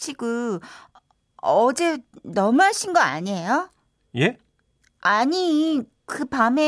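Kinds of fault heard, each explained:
No technical faults can be heard anywhere in this speech recording. There is nothing to list for it.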